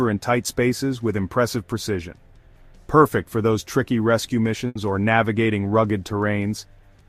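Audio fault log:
4.67 to 4.77 s, burst of packet loss: the sound stalls into a smeared, held tail that fades for about 80 ms, then picks up again abruptly and a little further on than expected. A short run of packets never reached the player in time, so the receiver stretched the last good audio across the hole while lowering its level, and when data returned, playback skipped ahead, leaving about 80 ms of the original missing.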